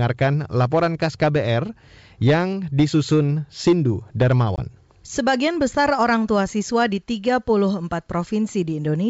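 At 4.56 s, packet loss on an ADPCM call drops about one 20 ms packet to silence; the desynchronised G.722 decoder returns with slight distortion, settling by 4.62 s.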